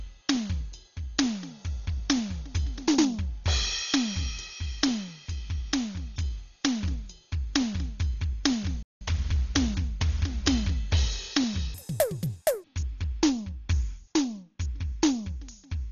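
The whole piece of music sounds dull and boxed in, with a rough, fluttery noise hanging around the sustained tones. That points to heavy Dolby Digital compression, likely at a very low bitrate, something like 32 kbps. The encoder has cut the band short and starved a lot of the frequency lines of bits, so the decoder patches them with noise, and that's the grit you hear clinging to the tones.

At 8.83 s the music just drops out, a playback stall lasting about 183 ms, until 9.01 s. It sounds like the player ran out of data or got held up for a moment, and the output sat silent until it caught up again.

From 11.74 s to 12.64 s a section plays at the wrong speed, running twice as fast as it should. Because speed and pitch move together, everything jumps up by close to ten semitones and sounds squeaky and rushed. That's likely a stretch handed to a player or editor running it against the wrong clock, and it drops back to normal pitch and pace right after.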